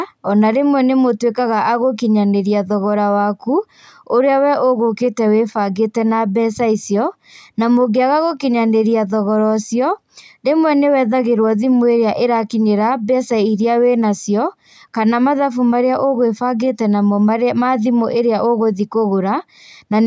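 Nothing goes wrong anywhere in this speech, which has simply come through a call's microphone processing that trims away the deepest bass and leaves nothing above 8 kHz, exactly as that path normally does.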